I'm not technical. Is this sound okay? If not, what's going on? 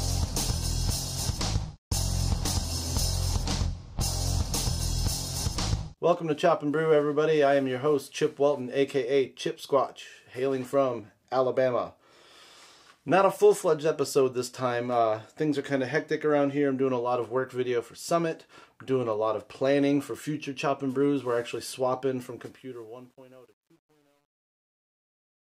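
No. From 22.18 s the fade-out passes through a volume stage that keeps too few steps (roughly 10-bit), causing truncation distortion: the tail turns gritty, worst from 22.94 s.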